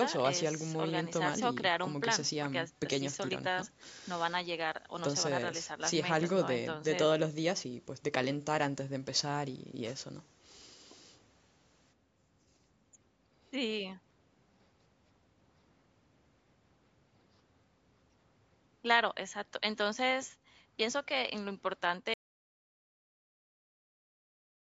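At 22.14 s the speech cuts off abruptly into complete silence that lasts to the end, about 2.6 s, with no room tone at all. This is an audio dropout to silence, likely from the input being lost while recording carried on writing silence.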